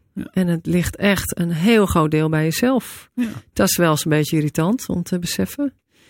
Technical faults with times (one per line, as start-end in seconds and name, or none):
none